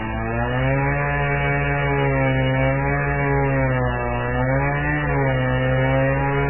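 MP3 compression, heavy and throughout this everyday-sound recording: treble stops at 3 kHz and weak detail swirls, likely a starved encode fitting about 8 kbps.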